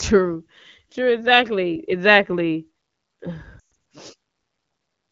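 At 3.60 to 3.69 s, lost AMR speech frames break up the sound. Corrupted frames arrive over a span of about 160 ms, with a longest run near 120 ms, and seven 20 ms frames (140 ms) lost in all. The AMR-WB decoder (running at 12.65 kbit/s, clear until this point) repeats its last good pitch and vocal tract settings with falling gain. The sound drops to near silence within two frames before returning briefly rough. Unlike a hard dropout, there is no abrupt cut to digital silence.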